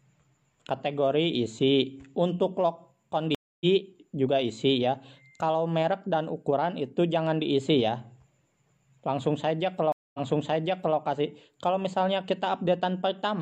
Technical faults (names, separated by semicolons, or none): stream reconnect